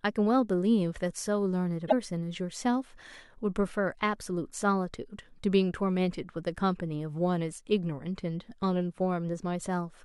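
A speech recording with one fault: damaged data in a compressed stream. It occurs from 1.84 to 1.93 s, a span of about 84 ms. There the sound breaks into a brief chirp, squawk, click or short hole. Some bytes in the encoded file were lost, zeroed or overwritten. The decoder could not read those frames properly. It lost sync and had to hunt for the next valid frame header before speech resumed.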